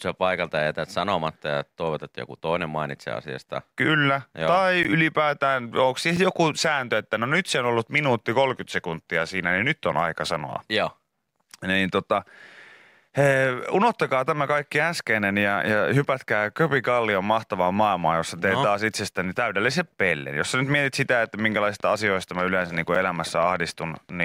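At 4.83 s, just before "ylipäätään onko siis joku", there is a block of digital silence lasting 16 ms. The output buffer was likely not filled in time, so the speech drops out and back with no fade. It sounds like a short hole.

At 6.17 s, between "ylipäätään onko siis" and "joku sääntö että no", a second gap of about 5 ms fits a 256-sample buffer. It is heard as a sharp tick.

From 20.7 s, after "sä nyt", a train of clicks runs until 24.2 s. It is about thirty evenly spaced clicks at 7.4 per second, each about as loud as the speech. The cause is likely interference or a faulty connection injecting pulses. It sounds like steady ticking over the words and pauses.

At 22.95 s, within that stretch, a third block of digital silence lasts about 8 ms. It adds another tick.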